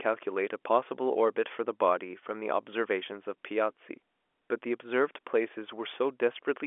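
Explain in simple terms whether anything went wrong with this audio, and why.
Nothing went wrong here, since the speech just has the narrow, slightly boxy sound of an ordinary landline call, which is simply how G.711 telephone coding sounds, carrying only the middle of the sound range and leaving out everything above about 3.6 kHz.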